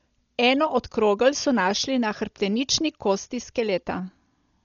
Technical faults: Dolby Digital compression

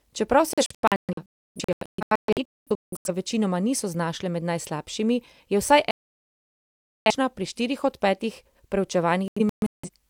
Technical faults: digital broadcast dropout

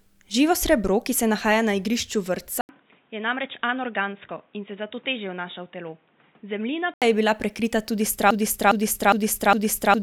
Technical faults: input switched to a poorer device; broken-record loop

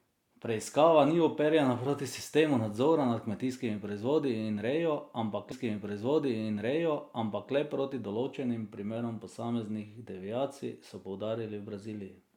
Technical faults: stream segment repeated

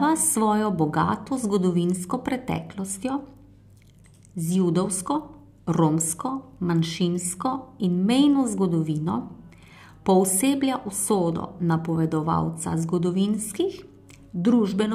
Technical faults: none

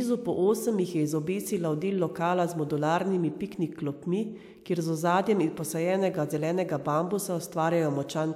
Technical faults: none

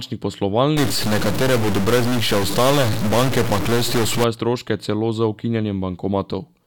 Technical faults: stuck bit

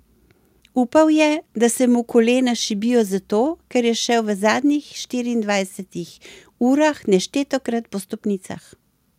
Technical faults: none

